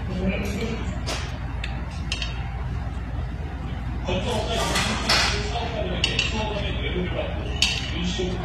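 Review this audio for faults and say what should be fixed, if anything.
The whole clip has gritty, metallic treble that doesn't sit right with the lows, likely HE-AAC compression, with the highs rebuilt from copied lower bands at what sounds like about 24 kbps. Encode at a higher bitrate or with plain AAC so the top end is actually coded.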